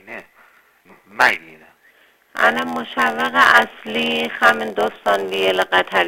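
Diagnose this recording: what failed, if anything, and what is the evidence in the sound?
A block size mismatch (padded) at the driver or buffer stage: a steady 86.1 Hz buzz runs throughout, fitting zero-padded 512-sample reads at 44.1 kHz. The audio plays at 0.938 speed with timbre unchanged, which rules out a sample-rate mismatch.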